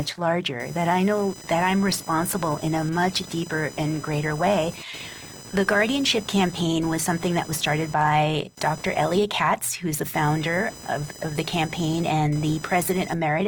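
Speech runs the whole way through with computer activity noise underneath: a buzzy, chirpy whine pulsing at around a kilohertz, sitting roughly 20 dB below the talking. It tracks the machine's load rather than the speech, as processor or mouse activity shifts the shared audio ground.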